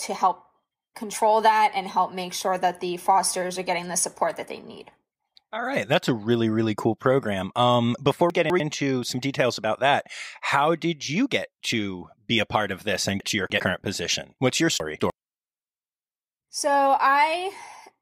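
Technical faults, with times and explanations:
8.3–8.6 s, 13.2–13.6 s, 14.8–15.1 s: chunks out of order. In each, a 100 ms chunk plays two (three at 13.2 s) chunks late, so the speech jumbles briefly, with three hard joins. Waveform and spectrogram show abrupt discontinuities where the contours jump.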